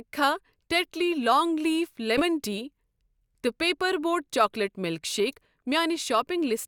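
Compressed frames skipped at 2.17 to 2.22 s in this speech clip: the audio jumps forward by about one frame's worth, which fits a 20 ms codec frame that was missing or rejected as damaged.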